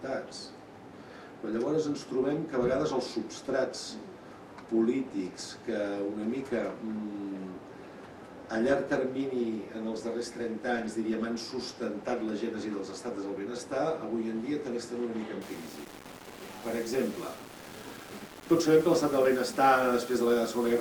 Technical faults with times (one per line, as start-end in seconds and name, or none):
15.42-20.80 low bit depth without dither